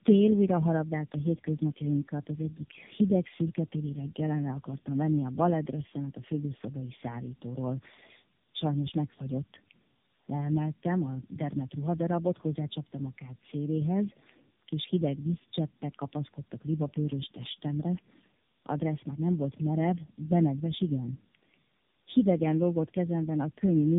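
Throughout, tandem speech coding: three narrowband AMR passes, likely near 8 kbit/s, compound their damage, leaving rough, muffled, warbly speech with nothing above 3.7 kHz.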